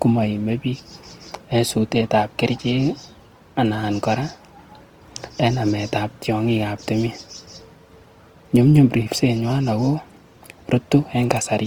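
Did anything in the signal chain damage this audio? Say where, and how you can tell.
Yes: the damage happened at the codec stage and runs through the whole speech clip. The sound stays fullband, reaching about 20.2 kHz, yet it is grainy and rough, with a noisy texture where cleaner detail should be. That points to Opus compression, likely in its CELT music mode at a rate around 24 kbps, with thin bands refilled by folding and noise. MP3 would leave swirling spectral holes, and SILK would sound muffled and narrowed.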